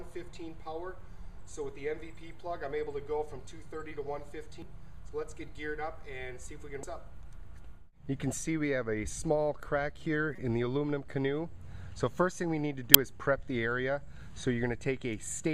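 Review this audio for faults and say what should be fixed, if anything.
Damaged data in a compressed stream at 4.62 s, 6.83 s, 10.36 to 10.39 s and 12.94 s: part of the encoded stream was corrupted, so the decoder misread or rejected those frames, lost sync and had to search for the next valid frame header before resuming. Each spot breaks briefly into a chirp, squawk, click or short hole in the sound. The first, second and fourth last only a few milliseconds, and the third runs about 32 ms. Fix it by re-fetching or re-encoding from an intact source, and carry the stream over a checksummed, error-checked transport.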